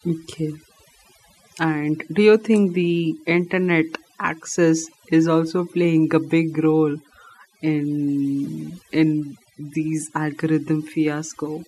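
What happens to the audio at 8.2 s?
At 8.2 s the speech is affected by overdone noise removal, which runs through the entire clip rather than starting at that point. The noise reduction was set too aggressively: individual frequency bands sitting close to its noise estimate are pulled far down or gated off, taking the quieter components of the voice with them. The background drops and breaks up into twinkling, chirpy specks.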